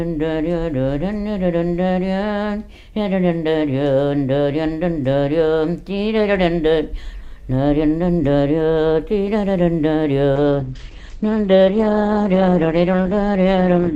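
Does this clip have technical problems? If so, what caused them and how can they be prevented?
Yes. A call bitrate drop from 10.37 s to the end cuts coding from 64 to 10 kbps. Sound turns coarse and muffled, cut off at 8 kHz. A stable network path and a higher minimum encoder bitrate prevent it.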